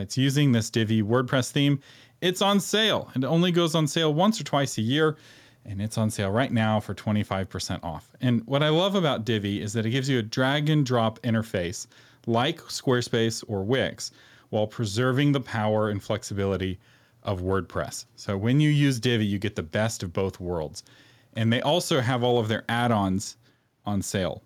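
No technical faults occur at any point in the recording, so there are none to describe.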